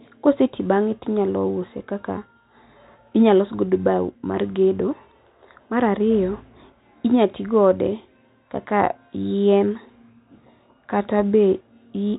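Nothing in the speech stood out as a technical problem on listening.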